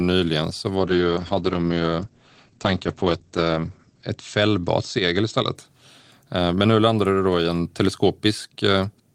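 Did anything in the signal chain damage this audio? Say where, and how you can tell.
Yes. A call bitrate drop from 0.76 to 5.61 s. The bandwidth estimate fell. Speech loses everything above 8 kHz and turns coarse, which fits Opus at about 10 kbps.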